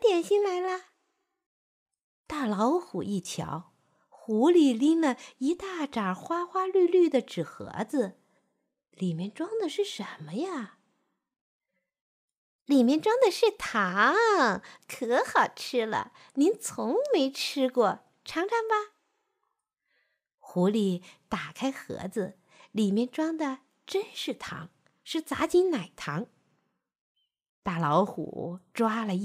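No technical faults are audible.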